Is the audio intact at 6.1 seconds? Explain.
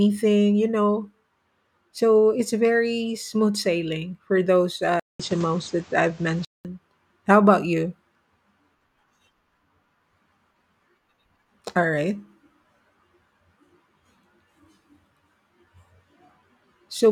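No. From 5.00 to 6.65 s the input likely switched to a poorer device: a 200 ms gap, then duller speech with nothing above 8.4 kHz, a small level shift and a new noise floor.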